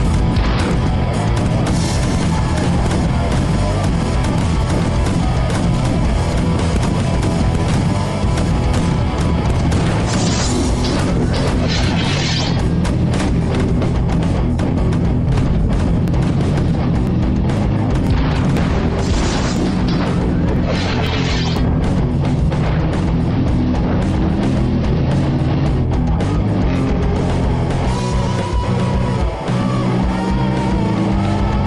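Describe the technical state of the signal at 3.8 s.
At 3.8 s the signal is intact, with no technical fault present at that moment.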